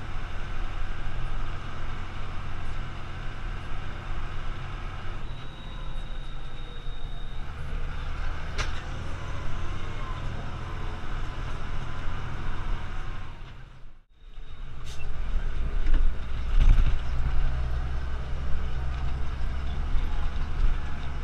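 Hard clipping at 15.91–16.07 s and 16.58–16.79 s: peaks overdriven by about 3 and 4 dB are sliced flat, leaving squared-off waveform tops, spectrogram smears of high harmonics, and crackle on peaks.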